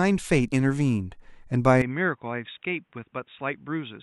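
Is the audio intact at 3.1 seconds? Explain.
No. At 3.1 seconds the speech sits inside a stretch running from 1.82 s to the end where the input has, most likely, switched to a poorer device. There's no gap at the switch. The sound just goes dull and boxy, with nothing above about 3.8 kHz, and the level drops by roughly 10 dB. A faint new noise floor also comes in, well below the speech, carrying the second device's own character.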